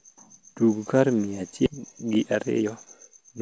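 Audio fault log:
1.66–1.68 s, skip ahead: Roughly 0.7 s of audio was dropped while later audio was already queued, then playback resumed with no filler. The speech jumps forward abruptly, its two sides spliced almost directly, with that stretch simply gone.
1.78–3.40 s, jitter buffer speed-up: The buffer was left holding more audio than it targets, so it repeatedly cut out short pitch-period pieces, around a fifth of a second in total. The speech plays about 10% faster at unchanged pitch and sounds hurried.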